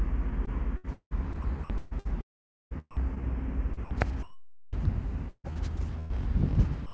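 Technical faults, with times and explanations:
0.00–2.07 s, 2.21–3.22 s and 3.73–3.91 s: sound chopped by the voice detector. In each stretch the sound keeps breaking off and returning, with parts swapped for a flat synthetic hiss: about 0.56 s of the first stretch, 0.57 s of the second and 0.09 s of the third. This is likely because the sender's voice activity detector kept switching transmission off and on while the receiver filled each pause with comfort noise.
4.23–4.73 s and 6.86–6.93 s: sound dropped by the voice detector. The sound gives way entirely to steady, featureless noise, for half a second in the first case and for the final 0.1 s in the second, where the clip ends before any real sound returns. The likely cause is a detector that judged the sound to be background and stopped sending, leaving the far end to generate comfort noise in its place.
5.29–6.12 s: repeated packet loss (robotic sound). 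Four gaps fall close together, with the longest about 150 ms, and concealment patches roughly a third of the span, about 280 ms in total. The receiver fills each hole by stretching out the last audio it received, so the sound turns choppy, with short pieces missing between repeated fragments. Across the whole clip nothing is heard above 8 kHz, in keeping with a wideband call codec.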